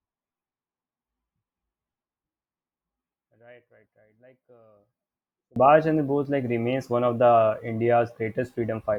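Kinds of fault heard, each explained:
One channel inverted: from the start to 5.56 s the speech drops by about 30 dB, as if its centre has cancelled out, which likely comes from one stereo channel having reversed polarity so the matching content subtracts when summed to mono.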